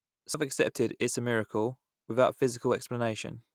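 A CD skip at 0.34 s, just before "accepted it as a", interrupts the speech. A jolt or a flaw in the disc surface threw the laser off its track onto a neighbouring turn of the spiral. The player went silent for only a few milliseconds, heard as a brief tick, and then resumed reading from that other turn. The speech picks up at a point displaced from where it broke off, so its flow is abruptly discontinuous.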